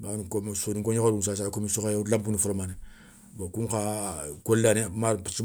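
Nothing goes wrong anywhere in this bit of speech, so there's no fault to point to at any moment.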